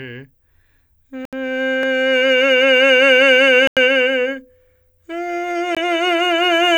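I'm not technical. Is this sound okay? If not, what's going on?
No. The music briefly cuts out three times: from 1.25 to 1.33 seconds (about 75 milliseconds of silence), from 3.67 to 3.77 seconds (about 94 milliseconds), and from 5.75 to 5.77 seconds (a tiny 18-millisecond gap). This is most likely a Bluetooth stall: wireless interference delays the audio on its way to the headphones, they run out of sound to play, and they fall silent until it arrives. Unlike crackle or distortion, the sound simply stops completely, then carries on.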